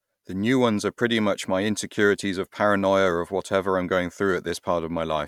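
Nothing in the recording stood out as a technical problem on listening.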